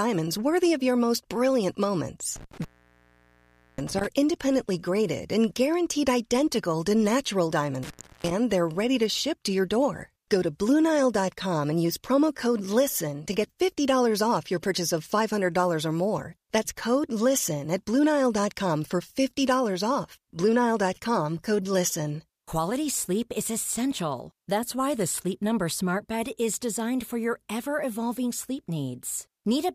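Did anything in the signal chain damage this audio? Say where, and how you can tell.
Yes: an intermittent contact in the analogue wiring. The speech cuts out with crackle at the edges at 2.36–4.07 s and 7.83–8.31 s, as a loose connector briefly opens.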